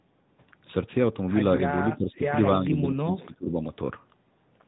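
Speech throughout sounds thin, boxy and buzzy, with nothing above 4 kHz and a synthetic edge on the voice. That is the AMR narrowband mobile codec: 8 kHz sampling and a coarse pulse-driven vocal tract model, with damage that fits a mid-rate mode of around 10 kbps. Between 1.56 and 1.62 s there is a brief warble and dip. That is a lost AMR speech frame: a single 20 ms frame failed, and the decoder patched it by repeating the previous pitch and vocal tract settings at falling gain. From 2.58 to 3.57 s the voice sinks by around 20 dB, losing level for about a second. It was likely suppressed in double talk, with the echo canceller turning the talker down while the far side was speaking at the same time.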